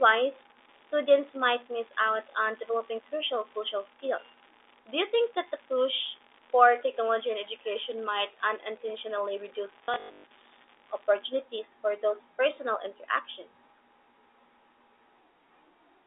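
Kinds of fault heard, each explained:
Unreliable data bit: One marginal data line flips its bit in a random share of samples, giving equal-sized spikes. Here a steady crackle runs from the start to about 11.25 s, through pauses as well, stopping just before "for those personal interactions".
Packet loss with last packet repeated: Lost packets were replaced by replaying the previous one. Between 9.84 and 10.24 s about 280 ms went missing, with runs up to 120 ms. The buzzy stutter fits 20 ms packets repeating at 50 Hz.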